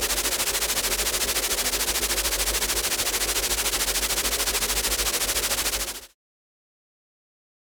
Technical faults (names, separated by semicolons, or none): none